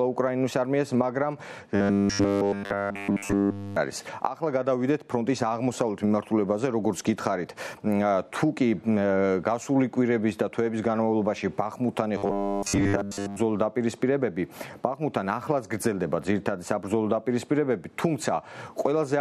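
Robotic sound from repeated short buffers hits at 1.75–3.76 s and 12.18–13.37 s. It is a rigid 100 Hz buzz, likely a 10 ms buffer being replayed, throughout the first stretch and mostly in the second.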